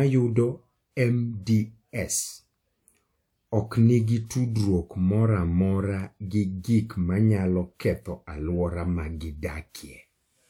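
At 4.26 to 4.30 s, a pre-echo appears ahead of a sharp speech attack. The transform codec's quantisation noise, sized for the loud onset, spreads back across the whole block, leaving a brief hiss about 45 ms long before the attack and blunting its edge.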